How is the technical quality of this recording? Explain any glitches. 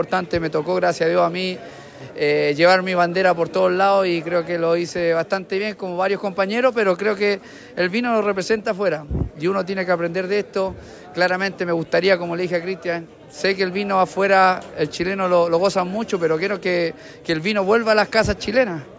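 The technical quality of this recording holds up, with no glitches to explain.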